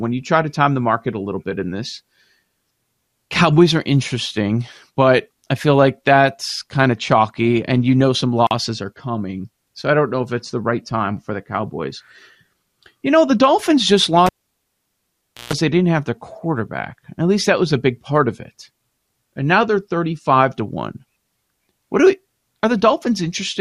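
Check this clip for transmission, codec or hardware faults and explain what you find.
One hardware fault turns up. From 14.26 to 15.53 s, a live cable is pulled and plugged in. A pop opens 1.2 s of near silence. Partial tip contact adds 0.14 s of 60 Hz mains buzz. Another pop comes as the speech returns, just before "they didn't have their".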